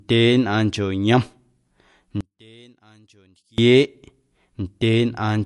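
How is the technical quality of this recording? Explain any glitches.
The recording has real problems: plainly audible codec damage across the whole clip, and a stretch in the middle where the sound nearly disappears.

From start to finish the speech has a watery, swirly edge, and nothing comes through above 11.3 kHz. That's likely MP3 compression. When the encoder runs short of bits, it throws away weaker frequency detail that flickers in and out between frames, and it cuts the top end at a fixed point. The damage fits a low bitrate of around 54 kbps.

From 2.21 to 3.58 s the level drops by about 30 dB, leaving only a weak residue of the sound. The likely cause is one channel inverted. One side of a stereo source had its polarity flipped, so folding to mono cancelled everything the two sides shared. What remains is just the small difference between them.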